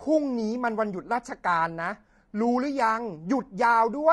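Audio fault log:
throughout: low-delay AAC compression. The speech has likely passed through a low-delay AAC codec, fitting AAC-ELD at around 32 kbps, whose very short frames resolve pitch harmonics poorly, so the voice sounds plainly rough and grainy, with noise filling the gaps between harmonics.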